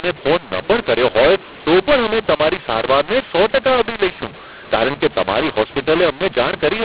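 From start to end, the speech carries a mu-law and A-law mix-up: mu-law G.711 samples are decoded as A-law, scrambling levels. It sounds harsh and distorted, with hiss filling pauses. The waveform looks jagged and uneven, and the spectrogram shows broadband noise smearing silences below 4 kHz.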